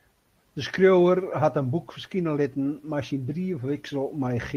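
No technical faults can be heard anywhere in the speech.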